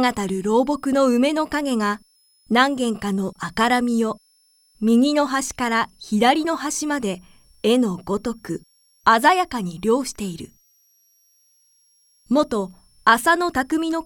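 A switching supply whistle runs through the whole recording: a thin, high tone centred around 5 kHz that wanders between about 5.0 and 5.8 kHz. It sits roughly 40 dB below the main signal, so it is quiet but persistent. The cause is a switching power supply dropping into an audible burst mode, or two supplies beating against each other, with the pitch shifting as the load on the supply changes.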